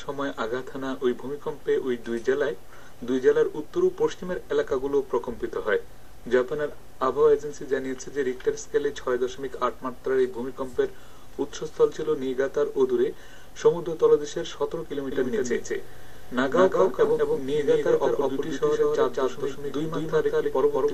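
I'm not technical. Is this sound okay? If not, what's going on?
No. There is a doubled audio track from 15.12 s to the end. At that point a second copy of the same sound suddenly joins in, about a fifth of a second behind the first and just as loud, so everything seems to happen twice in quick succession. The copy has no fade or room echo; it is an exact repeat. It is likely that the sound was picked up twice, once through a slower route, and both were mixed together.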